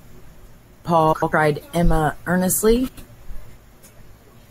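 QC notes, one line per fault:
1.13–1.32 s, frames out of order: two adjacent runs of about 96 ms arrived swapped and decoded that way, so the halves play exchanged, producing a garbled flutter.
2.88–3.08 s, frames out of order: the same swap of two neighbouring blocks of about 96 ms, which fits four 24 ms frames each. It causes reversed-order flutter, with no time lost.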